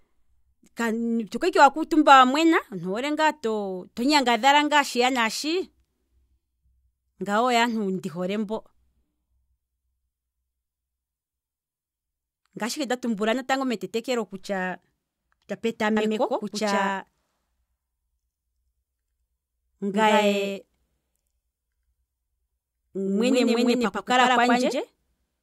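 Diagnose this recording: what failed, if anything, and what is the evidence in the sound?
From 15.97 s to the end, there is a doubled audio track: a full-band copy, roughly a tenth of a second late and about equally loud, that starts abruptly. The waveform shows every burst twice, and the spectrogram shows offset duplicate patterns. This is likely a second, slower capture path at the driver or buffer stage.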